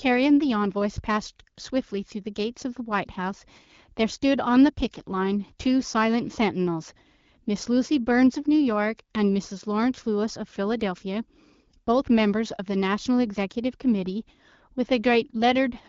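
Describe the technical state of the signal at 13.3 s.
At 13.3 s the speech is intact, with nothing wrong there beyond the light character of the AMR wideband (HD Voice) coding at 12.65 kbit/s that carries the whole clip.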